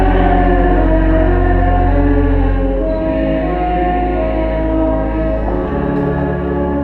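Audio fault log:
No fault found in this audio.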